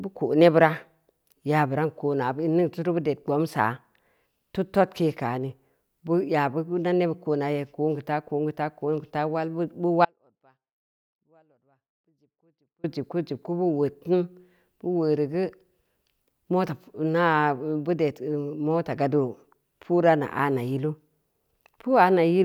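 From 10.05 s to 12.84 s the speech cuts out abruptly, leaving only a faint leak of sound roughly 40 dB down for about 2.8 s. This is an audio dropout to a faint residue, likely from the signal feed breaking while the downstream path stayed live.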